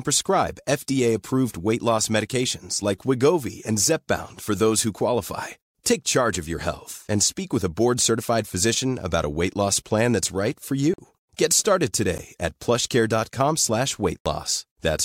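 Three times the output buffer likely went unfilled and was sent out as zeros, producing blocks of digital silence. At 10.94 s, right after "plan that's right for", the speech drops out for 46 ms, a length that fits a 2048-sample buffer. A 12 ms dropout at 12.18 s is brief enough to register as a tick. At 14.19 s a 70 ms gap leaves an audible hole. Each block begins and ends abruptly, with no fade.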